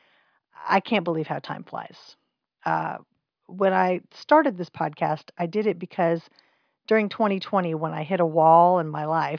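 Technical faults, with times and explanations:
Nothing technical trips up this bit of speech; there's nothing here to flag.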